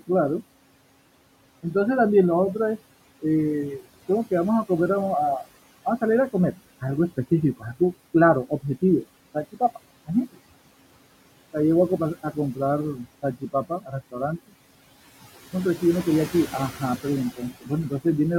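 Throughout the recording, overdone noise removal sets the noise reduction far too aggressively. It drives individual frequency bands down or out whenever they sit close to its noise estimate, taking soft parts of the voice with them. Gaps fall to near silence scattered with twinkling specks.

Also running the whole way, the noise suppressor artifacts come from frame-by-frame gain changes that pull the background down by about 17 dB between phrases and let it back up under the voice. The room noise, sitting about 18 dB below the speech, therefore pumps rather than holding steady.

From 13.4 to 13.94 s, speech is cut by the noise suppressor, which mistakes parts of the voice for background and drops them by up to about 17 dB. Roughly a fifth of a second in total is affected, so the affected speech sounds swallowed.

The same speech cut by the noise suppressor returns from 17.6 to 17.7 s, with a drop of about 16 dB across roughly a tenth of a second. 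That brief stretch of the voice turns faint, as if clipped away along with the noise floor.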